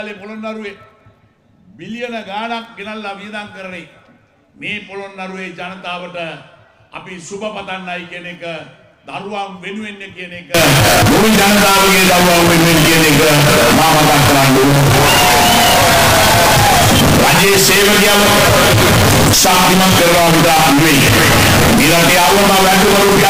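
Audio runs clean until 10.54 s, then turns harsh and very loud through to the end at 23.29 s. The waveform goes almost square, sitting at an almost fixed, high level whatever the original level. Background noise rises to match the main sound. This is a float read as integer fault. The likely cause is 32-bit float samples being read as 32-bit integers. The sign and exponent bits then dominate each value.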